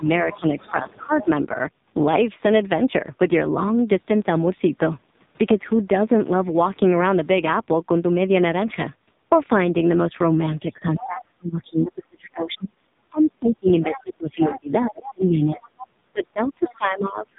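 Throughout, the speech carries the AMR narrowband mobile codec sound. Nothing above 3.8 kHz survives, so it is dull and boxy. The damage is heavy: buzzy, synthetic vowels, which fits a low mode near 5.9 kbps.

From 0 to 1.29 s, the speech is suppressed in double talk. The talker's level dips by around 10 dB, in pieces adding up to roughly 0.7 s. The likely cause is an echo canceller turning everything down while both sides spoke.

From 0.33 to 1.25 s, the other side's voice is leaking through underneath, about 20 dB below the talker. It likely comes from a loudspeaker echo the canceller failed to remove. It returns at 10.96 to 11.21 s and 13.82 to 14.94 s, about 15 dB down, then at 15.55 to 15.87 s and 16.62 to 16.75 s, about 20 dB down.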